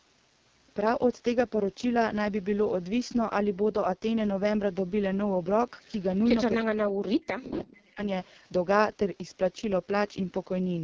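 From start to finish the speech carries heavy damage from the AMR wideband (HD Voice) codec. The sound is rough and raspy, which fits the 6.6 kbit/s mode, one of its two lowest rates. At that rate the coder's pulse-driven model of the vocal tract cannot follow the voice closely. Nothing is heard above about 7.3 kHz. The band above about 6.4 kHz is filled with shaped noise rather than real detail.

From 6.65 to 8.01 s the talker's level sinks and breaks up in pieces, for about a second in total. At its deepest the drop reaches roughly 40 dB. This is likely speech suppressed in double talk. Both ends spoke at once. The echo canceller could not tell this talker from loudspeaker echo, so it pulled the level down hard.

Inside that stretch, from 7.59 to 7.64 s, a faint delayed copy of the voice surfaces. It trails the original by 335 ms and sits about 25 dB below the speech. A second scrap follows from 8.25 to 8.3 s with the same delay, quieter at about 35 dB down. 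Both are short. The likely cause is echo leak. The far end's canceller let some of what its microphone picked up from its loudspeaker pass back down the line.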